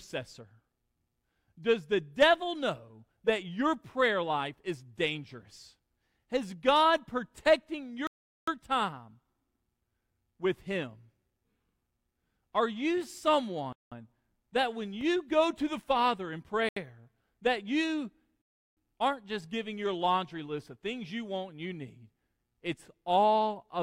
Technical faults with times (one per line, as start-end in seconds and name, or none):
8.07-8.48 Bluetooth stall
13.73-13.92 Bluetooth stall
16.69-16.76 Bluetooth stall
18.42-18.77 Bluetooth stall